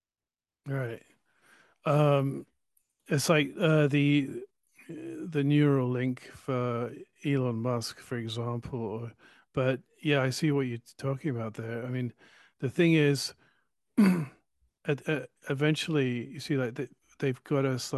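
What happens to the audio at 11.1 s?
At 11.1 s the speech carries on intact, with no dropout, click or other fault at that point.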